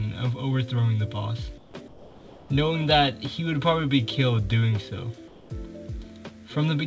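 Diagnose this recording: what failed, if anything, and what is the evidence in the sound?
Comfort noise in place of the background at 1.58–1.74 s, 1.88–2.50 s and 5.28–5.50 s. In each gap the real background turns into a steady, featureless hiss about 4 to 6 dB quieter. This likely comes from discontinuous transmission in call processing, with the receiver generating filler noise until sound resumes.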